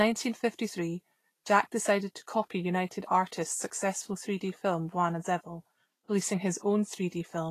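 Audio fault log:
Throughout: Vorbis compression. The speech was likely encoded with Vorbis at a low setting, and the grain points to a bitrate somewhere near 34 kbps. The encoder kept a smooth outline of the spectrum with a quantised residue on top, and quantised the treble so coarsely that its fine detail turned into noise of similar energy. Nothing remains above 14.2 kHz. What is left of the upper range sounds plainly hissy and grainy, with roughened tones and softened attacks.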